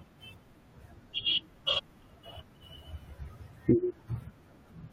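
Speech, with one case of compressed frames skipped at about 1.78 s to 1.80 s. A short run of encoded frames never reaches the output, either absent from the file or rejected by the decoder as corrupt, so the audio lurches forward by roughly 70 ms. That fits about three frames of 23.2 ms each.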